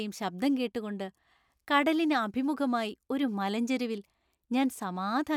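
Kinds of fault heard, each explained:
No technical faults are audible anywhere in the speech recording, and the signal holds steady without any disruption or damage to the sound.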